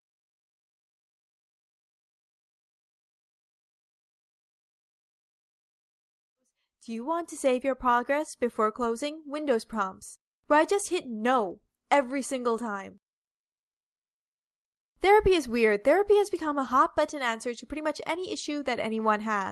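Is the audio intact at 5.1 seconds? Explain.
Yes, the audio at 5.1 seconds is intact, with no dropout, click or other fault at that moment.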